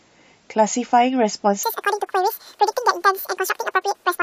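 From 1.63 s onward, audio read two samples at a time (double speed) plays twice as fast, an octave up.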